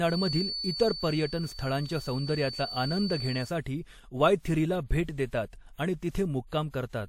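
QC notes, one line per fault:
Throughout: transcoding between lossy codecs. The speech carries two layers of coding damage at once. The artefacts of the two codecs are heard together. Nothing remains above 16.3 kHz, and that ceiling holds for the whole clip. The most likely cause is an MP3 encode near 60 kbit/s followed by a WMA encode near 64 kbit/s. The second codec wasted bits re-coding the first codec's errors and added its own.
0.00 to 3.55 s: feedback whistle. A thin, steady tone at 4.5 kHz sits behind the speech. It stays roughly 10 dB below the speech and swells and fades slowly in level. It never builds or runs away. It stops just before "'वायथिरी'ला भेट". This likely comes from a loudspeaker-to-microphone loop held right at the edge of feedback. One frequency keeps ringing without growing into a howl.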